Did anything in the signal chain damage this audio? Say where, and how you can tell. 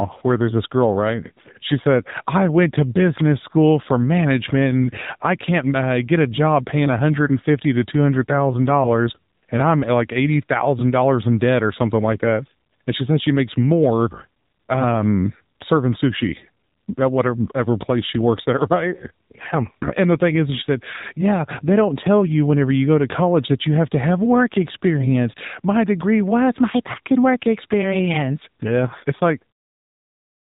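Yes. At the codec stage, the AMR narrowband mobile codec runs throughout the speech. Nothing passes above 4 kHz, and the voice has a buzzy, synthetic texture, which fits the low 7.4 kbps mode. A plain band-limiting filter would dull the sound without adding that synthetic buzz. The fade-out near 29.5 s is a normal edit.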